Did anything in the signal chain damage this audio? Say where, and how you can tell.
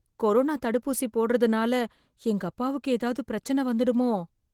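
No, nothing in the chain damaged this speech; it comes through Opus voice compression at about 20 kbps with the band intact up to roughly 20 kHz.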